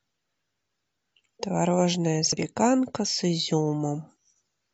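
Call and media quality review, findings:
Short glitch in the speech at 2.33 to 2.37 s, about 46 ms. Probable component: decoder input. Damaged data in the compressed stream. Decoder misreads the corrupt frames, loses sync, then resumes at the next valid frame header.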